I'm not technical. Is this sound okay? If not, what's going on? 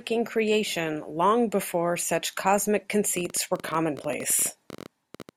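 No. After "long before such cosmic", from 3.17 to 5.3 s, a train of clicks ticks over the speech, about 15 a second at an uneven pace, likely interference from nearby equipment.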